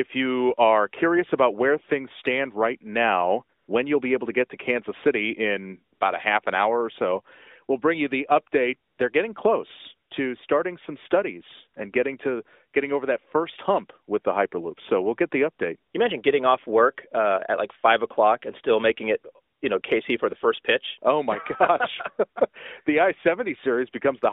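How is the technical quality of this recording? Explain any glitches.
The recording carries AMR narrowband mobile coding, heard as a 300 Hz to 3.7 kHz telephone band with light codec colouring that fits a 12.2 kbps mode. It has repeated brief comfort-noise dropouts.

AMR comfort noise at 3.58 to 3.68, 5.94 to 5.99, 8.90 to 8.98, 10.08 to 10.10, 15.92 to 15.94, 19.54 to 19.62 and 19.82 to 19.84 s, lasting 20 to 100 ms each. Speech frames stopped, and the receiver substituted smooth synthetic noise. The real background briefly gives way to a flat hiss, and quiet sound may be clipped.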